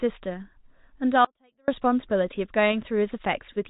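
From 1.25 to 1.68 s the speech drops out for about 0.43 s, leaving only a faint residue roughly 40 dB below normal level. This audio dropout to a faint residue was likely a break in the signal while the path after it stayed live. It differs from a pause or fade because the cut is abrupt at both ends and the gap is not true silence.

Short stalls from a late packet follow at 2.46 to 2.50 s, 2.68 to 2.72 s and 3.53 to 3.58 s. Each time the jitter buffer ran dry and stretched the last sound, by about 19, 19 and 32 ms, before carrying on from the same point. Nothing is missing. A sound is simply held slightly too long with a slight buzz or dip, heard against the call path's 4 kHz band limit, which fits G.711 mu-law at 64 kbps.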